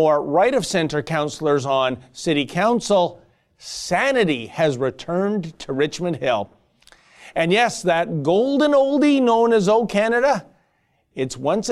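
No technical faults can be heard anywhere in this speech recording. Nothing stands out as a dropout, a distortion or a glitch in the sound.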